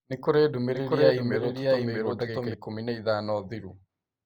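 From 0.74 s to 2.54 s the speech carries a doubled audio track. A second full-band copy of the same speech runs underneath, trailing by roughly 0.7 s and around 5 dB quieter. It sounds like an out-of-step echo, but with no decay or room colour. It starts and stops abruptly at those two times. The likely cause is the signal being captured twice, once through a slower path, or an edit leaving two misaligned copies mixed together.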